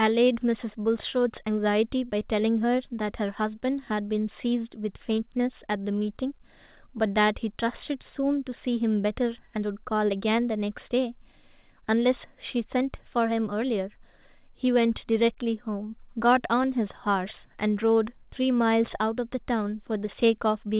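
No technical faults can be heard in this speech.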